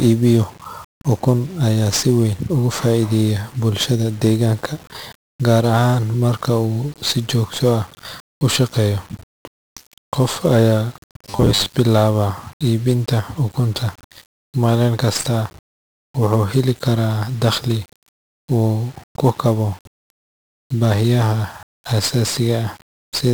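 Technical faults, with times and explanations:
throughout  1-bit DFPWM compression: the encoder keeps only one bit per sample, nudging an adaptive level up or down, which fits a 48 kbps stream. The coarse steps leave heavy broadband quantisation noise, so the speech sounds fuzzy and crackly and its treble disappears under hiss.
11.3 to 11.75 s  Robotic sound from repeated short buffers: fresh audio likely arrived too late, so playback looped the last snippet again and again while a large share of the real signal was skipped. The repeats impose a fixed 100 Hz buzz, one over a 10 ms buffer, turning the speech metallic and rigid.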